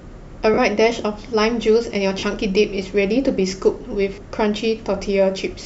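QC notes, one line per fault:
0.54–0.58 s, 2.19–2.23 s, 4.14–4.18 s: lost LE Audio frames. Each gap of about 40 ms, consistent with four 10 ms LC3 frames, becomes a short noisy smear as the decoder repeats the last spectrum with randomised signs and begins fading it, above the light, barely audible lossy compression.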